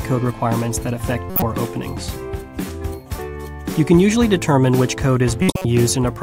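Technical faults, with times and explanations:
1.30 to 1.43 s and 5.42 to 5.65 s, corrupt frame decoded: bit errors inside compressed frames were decoded rather than concealed. Misread gains and spectral codes put energy in the wrong frequencies, producing harsh bursts that last a few frames each, longer in the second event.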